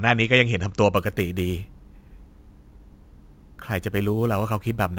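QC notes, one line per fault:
0.97–4.99 s, imaging from sample-and-hold upsampling: unfiltered sample repetition, fitting 16 kHz raised to 44.1 kHz, mirrors speech into 8–16 kHz about 23 dB down, a metallic fizz.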